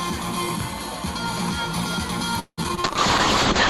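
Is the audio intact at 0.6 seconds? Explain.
Yes, the audio is intact at 0.6 seconds, with no dropout, click, distortion or other fault to be heard at that point.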